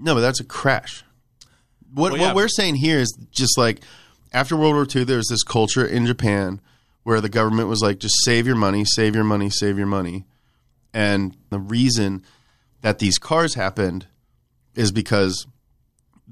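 No technical faults can be heard in the clip, so there are none to describe in time order.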